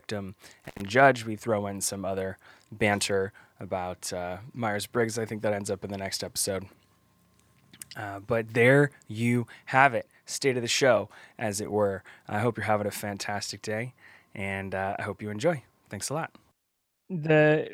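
Speech with an intermittent contact fault between 0.65 and 0.82 s: the signal briefly opens for about 70 ms, crackling at the edges, as a loose cable or plug loses connection. Unlike a clean digital dropout, the gap leaves faint hiss.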